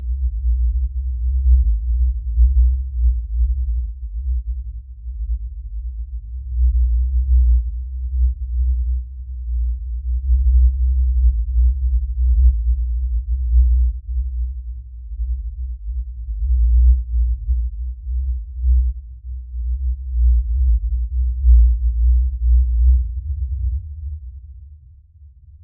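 Imaging from linear upsampling runs throughout: straight-line interpolation, which fits an 8 kHz to 48 kHz rate change, dulls everything near 4 kHz and leaves very faint mirrored images from 4 to 8 kHz.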